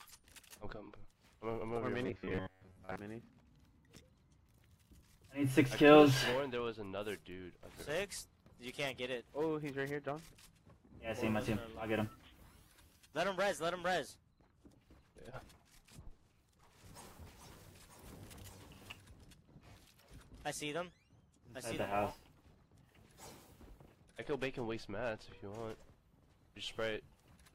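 From 2.06 to 3.00 s, a rigid metallic buzz at 93.8 Hz, likely robotic sound from repeated short buffers: a roughly 11 ms slice looping while real audio is skipped.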